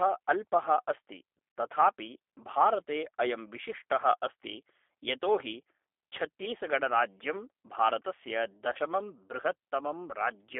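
The whole recording carries G.729 codec damage. It sounds like an 8 kbit/s speech coder: the line is confined to about 300 Hz to 3.5 kHz. The codec rebuilds the voice from a filter, a pitch predictor and a few pulses. That leaves it plainly rough and slightly synthetic.

From 1.50 to 1.56 s, VoIP packet loss concealed by the speech codec appears. About 60 ms is missing, which fits three lost 20 ms packets. The decoder stretches the last sound into a fading buzzy tone or coloured noise. The next frames stay weak while it recovers.

A shorter loss follows at 8.73 to 8.79 s. About 20 ms is gone, consistent with one packet. Concealment again smears the sound briefly, and the voice returns weak or distorted.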